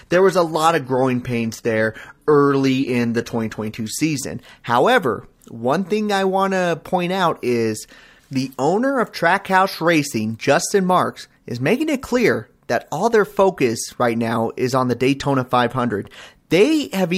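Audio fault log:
0.0–4.0 s, adaptive stream starting at a low bitrate: for the first four seconds the speech sounds dull and swirly, with treble that seems synthesized rather than real, which fits a player opening on a heavily compressed rendition near 20 kbit/s using spectral band replication. At 4.0 s it switches, with no gap, to a clearer rendition that suggests about 96 kbit/s. On a spectrogram the upper band looks smeared and patchy before 4.0 s, then fills in cleanly up to a cut-off at 17.7 kHz.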